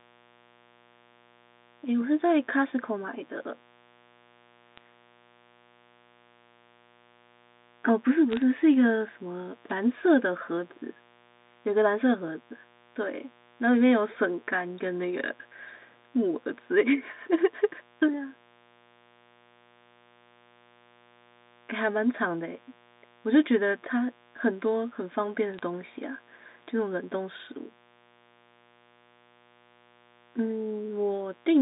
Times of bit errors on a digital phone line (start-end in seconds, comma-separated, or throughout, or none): 4.77-4.81, 8.32-8.42, 25.54-25.59